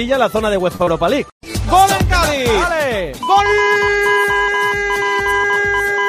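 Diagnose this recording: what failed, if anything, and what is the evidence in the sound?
Network stage: a short stall from a late packet at 0.75 to 0.82 s. The jitter buffer ran dry, so the sound hangs about 43 ms before resuming intact.

Also network: a short concealed packet loss at 0.84 to 0.89 s. About 40 ms never arrived, and the receiver patched it with extrapolated sound, leaving a brief smear.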